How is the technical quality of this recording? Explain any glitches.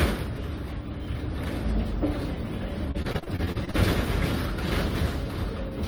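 Repeated packet loss (robotic sound) affects the recording between 2.91 and 3.76 s. Over that stretch, pieces of the audio arrived late or not at all, again and again. Each hole was patched by extending the last sound, with the longest gap about 37 ms, and nearly a third of the stretch ends up as filled-in material. The result is a choppy, stuttering texture with small pieces of the sound missing.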